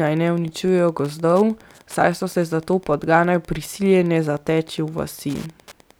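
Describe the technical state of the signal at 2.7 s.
A faint, steady ticking about ten times a second sits well below the speech at 2.7 s and throughout. This is Wi-Fi interference: a nearby radio's 102.4 ms beacons are rectified by the audio circuit.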